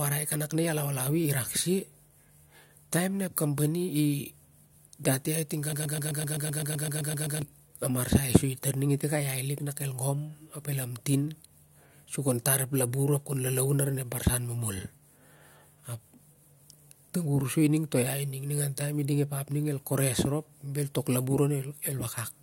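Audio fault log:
5.73–7.42 s, broken-record loop: the player, encoder or stream likely stalled here and kept re-sending the last fragment it held. A 128 ms slice of the speech repeats exactly, back to back, 13 times across about 1.7 seconds. That produces a rapid, mechanical stutter with a steady rhythm of roughly eight repeats per second. The speech that belonged in that span is lost rather than delayed.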